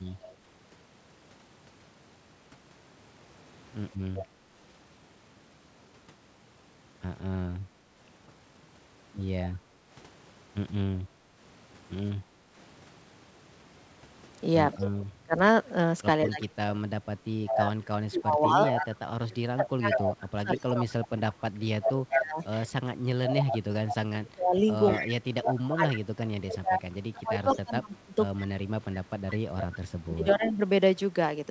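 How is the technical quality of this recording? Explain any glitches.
The recording has clear call-processing problems: echo returning from the far end, brief gating of the room sound, and heavy dips in the talker's voice during the long second half. The audio stops at 8 kHz, which fits a wideband call codec such as G.722.

Echo leak occurs at 0.23–0.35 s and 4.14–4.25 s, then continuously from 14.81 s to the end. The likely cause is an echo canceller on a loudspeaker-side device that failed to remove all of what its microphone picked up, so that sound was sent back. Each time you hear a delayed copy trailing the original by 190 ms. In the first scrap it sits roughly 25 dB down. By the second it rises to about 15 dB down. Through the final stretch it is only about 10 dB below the speech.

Background gated by the echo canceller happens between 9.69 and 12.54 s. While the loudspeaker was playing, the canceller clamped the microphone down hard to keep echo out. 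It took the room ambience with it. The background sinks by up to about 8 dB in short dips that add up to roughly half a second, and it comes back each time the canceller releases.

Speech suppressed in double talk runs from 14.74 to 30.6 s. Both sides were talking at once. The echo canceller likely could not separate the local talker from the loudspeaker echo, so it attenuated both. The voice repeatedly dips, thins out or breaks up. At its worst it drops by something like 30 dB, and the affected moments total around ten seconds of that span.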